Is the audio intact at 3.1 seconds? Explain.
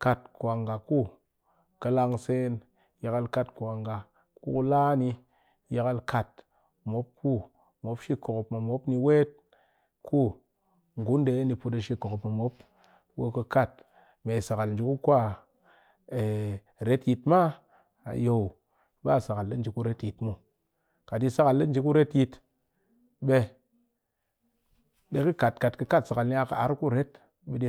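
Yes, at 3.1 s the audio is intact, with no audible fault at that moment.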